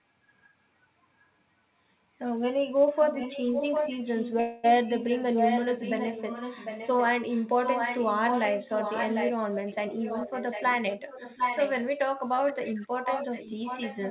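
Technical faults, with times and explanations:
2.96–9.32 s, 9.68–11.85 s, 12.47–12.88 s, 13.04–14.10 s: echo leak. The far end likely plays the call on a loudspeaker whose echo canceller lets its microphone's pickup return, so a 750 ms delayed copy trails the speech, about 5 dB down at first, then about 10, 15 and 10 dB below.
4.40–4.66 s: call audio freeze. Delayed packets likely emptied the jitter buffer, so the receiver stretched the last sound into a fading buzz lasting 236 ms. When the packets arrived, the speech resumed where it stopped, with nothing lost but timing shifted later.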